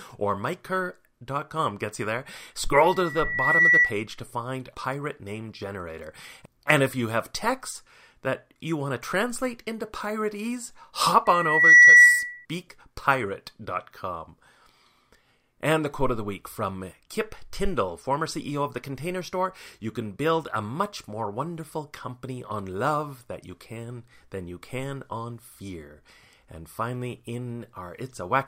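A microphone is picking up the loudspeaker it feeds, and at about 1.9 kHz the loop gain rises above one, so this speech recording carries loudspeaker feedback squeal twice. From 2.78 to 3.99 s a steady tone swells over about a second to roughly 10 dB above the speech. From 11.25 to 12.46 s the same 1.9 kHz tone returns, building faster, in about half a second, and louder, at roughly 15 dB over the speech.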